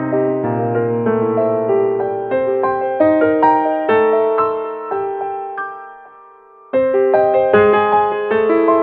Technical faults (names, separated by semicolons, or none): none